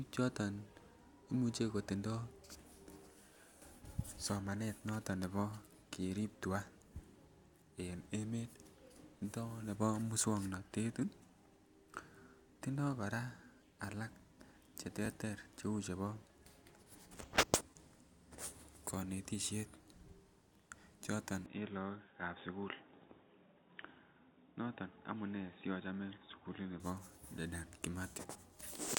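At 15.05 to 15.07 s, chunks out of order: one 10 ms chunk plays a chunk late, swapping its place and producing a brief jumbled moment.

From 21.46 to 26.8 s the speech turns dull and boxy, with nothing above 3.8 kHz and a faint new noise floor, likely an input switched to a poorer device.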